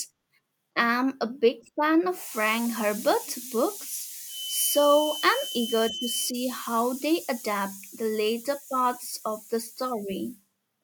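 A speech clip in which a thin whistle at 3 kHz, swelling and fading slowly, sits roughly 10 dB below the voice from 4.25 to 6.35 s, ending just before "how they adapt the". This feedback whistle is likely a loudspeaker-to-microphone loop held right at the edge of feedback.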